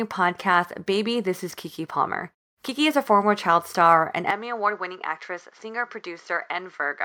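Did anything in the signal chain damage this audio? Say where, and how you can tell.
Yes. From 4.31 s the speech narrows in band, gets quieter and gains faint new noise, seamlessly: likely input switched to a poorer device.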